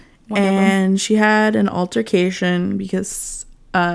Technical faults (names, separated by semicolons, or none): none